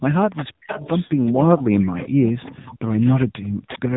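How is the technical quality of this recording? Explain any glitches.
Quality's pretty rough: it's a phone call with two problems.

Throughout, there's AMR narrowband mobile codec damage. Nothing above 3.8 kHz survives, and the low-bitrate vocal-tract model (sounds like roughly 8 kbps) makes speech buzzy and synthetic.

There's also echo leak from 0.36 to 1.63 s, 1.79 to 3.26 s, and 3.67 to 3.79 s. A copy of the speech trails 398 ms behind, roughly 10 to 15 dB down, likely because a far-end speakerphone's echo canceller let some through.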